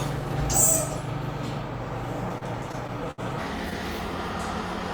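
From 2.29 to 3.20 s the audio shows repeated stalls (stutter): seven brief holds, the longest 68 ms, adding 146 ms in total. Packets arrived late, the jitter buffer drained each time, and the receiver stretched the last sound until data resumed, so the passage drags and catches without losing content.

From 3.39 s to the end, the section plays at the wrong speed, 1.5 times too fast, with pitch raised by roughly seven semitones. This is likely the result of playback or editing against a mismatched clock, so the sound turns hurried and noticeably higher.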